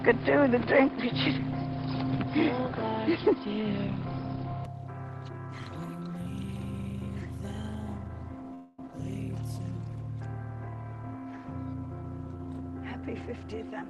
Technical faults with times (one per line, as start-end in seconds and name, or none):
0.00-4.65 input switched to a poorer device
8.54-8.79 call audio freeze
13.00-13.89 jitter buffer speed-up